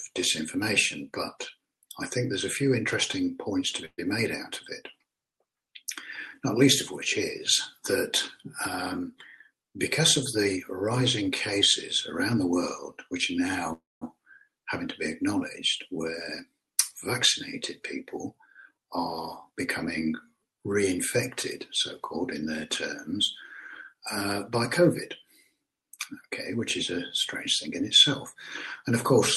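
Packets likely stalled in transit at 3.85 s, letting the jitter buffer run dry and causing a call audio freeze. The receiver stretched the last sound into a fading buzz for 125 ms, about 40 ms of it silent, then resumed where it left off. Nothing is lost, but the delay grows by the same amount.

The buffer then held more than its target, so a jitter buffer speed-up followed from 8.99 to 12.34 s. Pitch-period slices totalling roughly 150 ms were cut out, running the audio at 104% with unchanged pitch.

At 13.73 s a second freeze filled 286 ms, with a longer 200 ms stretch of silence before the audio picked up again.

Further speed-ups trimmed the extra delay: 15.99 to 16.78 s at 106% (about 50 ms removed, the most hurried), 18.01 to 19.52 s at 104% (about 70 ms), and 26.55 to 28.84 s at 102% (about 50 ms). Throughout, the band tops out near 12 kHz, which fits a superwideband Opus call setting.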